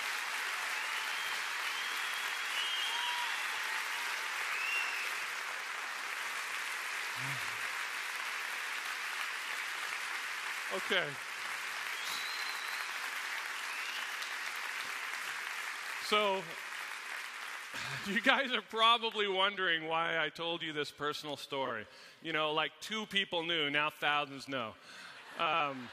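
Frames out of order occur at 5.51 to 5.61 s, 15.73 to 15.83 s, 21.65 to 21.70 s and 25.46 to 25.60 s. In each, two adjacent blocks of about 46, 46, 23 and 70 ms play in swapped order, which fits whole frames of roughly 23 ms. Each stretch sounds like a brief garbled flutter. No time goes missing.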